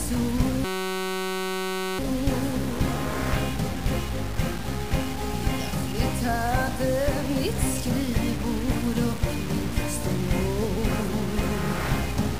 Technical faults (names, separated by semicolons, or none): low bit depth without dither; system hang loop